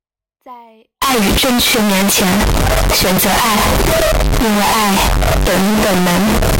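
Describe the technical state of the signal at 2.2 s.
At 2.2 s the speech sits inside a stretch of severe, harsh distortion running from 1.02 s to the end at 6.59 s, the sound of signed and unsigned mixed up, likely in how the 16-bit samples are read. Flipping the top bit turns every zero crossing into a full-range jump, so quiet moments blare as loudly as the rest. The waveform appears as a solid slab swinging between its extremes, and the spectrogram shows dense broadband energy throughout.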